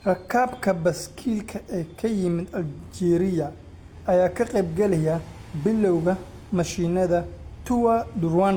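Across the whole speech clip, the sound carries several layers of compression damage at once, with the different artefacts heard together, and nothing above 20.4 kHz. This points to transcoding between lossy codecs, likely a chain such as MP3 at around 96 kbit/s, then Opus at around 32 kbit/s, then HE-AAC at around 48 kbit/s. Each encoder spent bits reproducing the previous one's artefacts while adding its own, so the distortions stack.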